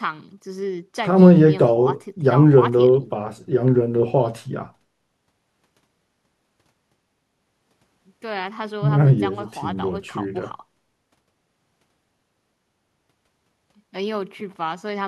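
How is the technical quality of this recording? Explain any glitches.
The technical quality of this recording is sound, with no glitches to explain.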